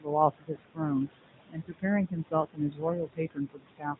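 Speech, about 4 seconds long, carries two faults throughout: AMR narrowband mobile codec damage and noise suppressor artifacts. The codec runs at 8 kHz sampling and rebuilds the voice from a vocal-tract model excited by a few pulses per subframe. The result is plainly buzzy and synthetic, with the bitrate sounding consistent with the 10.2 kbps mode. On a spectrogram, everything above 4 kHz is a flat, empty ceiling, and the harmonics below it look smeared and grainy. The suppressor pulls steady background down by about 20 dB, frame by frame, so the noise sinks between phrases and rises under the words. Those gaps show as a dark, speckled floor with isolated blobs flickering on and off. The room noise, sitting about 11 dB under the speech, is what gets chewed into that pattern. The same suppressor also mistakes parts of the speech for noise, producing speech cut by the noise suppressor in four places: 0.31–0.8 s, 1.49–1.84 s, 2.08–2.83 s and 3.06–3.96 s. 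In each span, parts of the speech drop by about 19 to 21 dB and sound swallowed or faint, amounting to a few hundred milliseconds per span and about half a second in the last. In the waveform, the envelope dips. In the spectrogram, those stretches thin out to only the strongest harmonics. Two lost AMR speech frames also occur, at about 0.54 s and 2.42 s. Each is a brief warbly dip, consistent with a single 20 ms frame failing and being concealed by repeating the previous pitch and vocal-tract settings at reduced gain. Each appears as a short notch in the waveform and a blurred vertical smear in the spectrogram, after which the voice returns briefly weak or rough.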